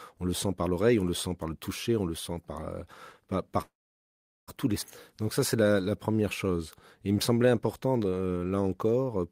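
At 3.61 s the speech stops and a call audio freeze sets in, lasting until 4.50 s. The last sound carries on briefly as a fading buzz. Then about 0.77 s of silence follows. The likely cause is packets held up in transit, so the jitter buffer ran empty. The receiver had nothing new to play. When the audio resumes with "tous les", nothing is lost. The stream is simply 0.86 s later than before.

Straight after "tous les", at 4.82 to 4.84 s, there is a skip ahead. Roughly half a second of speech is gone. The join is almost seamless, with only a tiny fill. A stretch was dropped while later audio was already waiting, which takes back part of the delay the freeze added. The result is an abrupt cut from one sound to a later one.

Two jitter buffer slow-downs follow. From 5.23 to 6.58 s the speech runs at 91% speed, with 136 ms added. From 7.00 to 9.18 s it runs at 88%, with 279 ms added. The buffer was building a reserve by repeating single pitch periods and bits of pauses. 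Pitch stays the same. Sounds are drawn out, and the pace feels sluggish.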